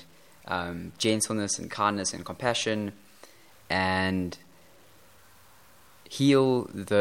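A speech recording carries two faults. Throughout, the signal was likely truncated to about 9 bits with no dither, so its rounding error tracks the audio instead of forming a steady hiss. The result is a grainy, gritty distortion roughly 35 dB below the signal that shifts with the speech and is most obvious on quiet syllables and decaying word endings. These low-level passages sound rough and can sputter as they fall toward silence. Separately, periodic USB or driver dropouts come from a background task stalling the audio path about every 1.02 s, from 0.72 s to 6.85 s, roughly seven times in all. Each stall skips a tiny sliver of audio, only a fraction of a millisecond, with nothing filled in. The abrupt splice produces an evenly spaced tick wherever speech is present at that instant.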